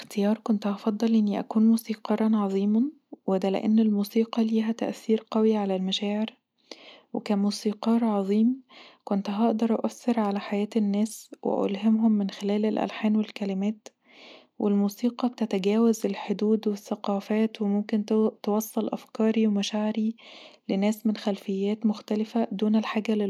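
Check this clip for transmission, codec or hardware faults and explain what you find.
No transmission, codec or hardware faults can be heard anywhere in this speech recording, so the signal arrives in a technically sound state.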